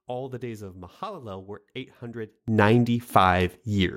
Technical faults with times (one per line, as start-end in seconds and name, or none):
2.48-3.96 sudden gain jump